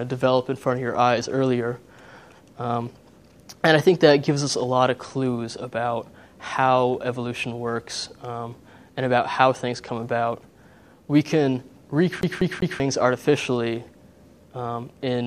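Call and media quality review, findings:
CD stuck on one turn, 12.21–12.80 s. Same 0.2 s (195 ms) segment repeats 3 times, short mute at each jump. Probable component: disc/optical pickup. A scratch sends the laser back one track per rotation, causing an even, rapid stutter.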